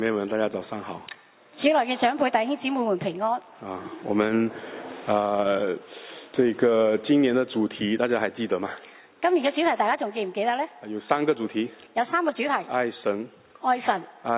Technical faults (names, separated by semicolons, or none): none